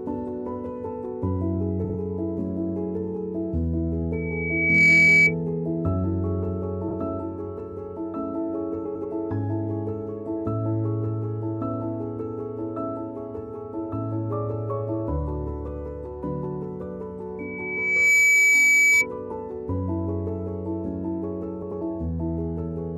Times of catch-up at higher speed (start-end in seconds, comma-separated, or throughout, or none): none